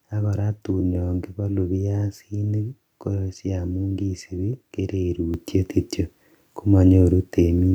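At 5.34 s the microphone volume stepped up: the calling software judged the input too quiet and raised the device's capture level in a single jump of about 7 dB. The speech and the background noise behind it become louder together, instantly and without any fade.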